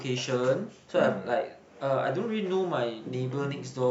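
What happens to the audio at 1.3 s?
Nothing goes wrong at 1.3 s: the speech carries on intact through that moment, with no dropout, click, distortion or other fault.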